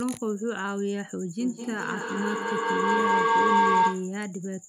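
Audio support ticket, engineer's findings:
Rising tonal howl around 1 kHz, 1.4–4.18 s, repeating roughly every 200 ms, peaking about 8 dB above speech. Feedback howl: two devices sharing room and call, mic-to-speaker loop gaining each pass.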